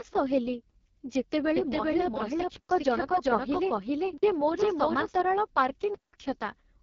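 Speech coded with the AMR wideband (HD Voice) codec at 6.6 kbit/s, one of its two lowest rates, so the voice sounds rough and raspy throughout. On a spectrogram nothing appears above about 7.1 kHz, and the 6.4 to 7 kHz band looks like smooth noise rather than harmonic detail. From 1.56 to 5.20 s a doubled audio track is audible: a full-band copy of the same speech, about as loud as the original, trailing by roughly 0.4 s with no reverb tail. It is likely caused by a second, slower capture path, and it starts and stops abruptly. A waveform shows the same shapes repeated at that fixed offset. Three blocks of digital silence cut the sound with no fade: 2.56 to 2.69 s (130 ms), 4.18 to 4.23 s (46 ms, which fits a 2048-sample buffer) and 5.94 to 6.13 s (186 ms, which fits an 8192-sample buffer). They appear as near-silent stretches in the waveform and as blank vertical strips on a spectrogram.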